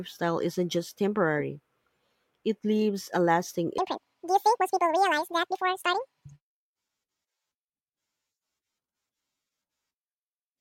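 After "it leaves a lasting", 3.78 to 6.73 s, audio is read two samples at a time (double speed), so speech races an octave higher.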